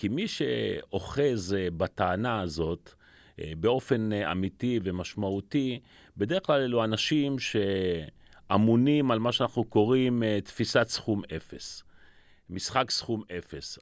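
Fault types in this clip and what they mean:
No faults detected in the speech; nothing to report.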